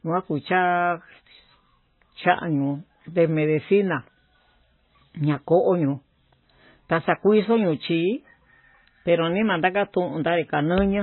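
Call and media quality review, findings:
MP3 compression, heavy, throughout the speech. Symptom: dull, band-limited sound with nothing above 4 kHz. Watery, swirling texture, smeared attacks, chirpy s sounds. Likely cause: MP3 encode starved of bits, which fits roughly 17 kbps. Mechanism: encoder cuts treble at a fixed frequency and drops weak spectral lines. Those lines flicker between frames.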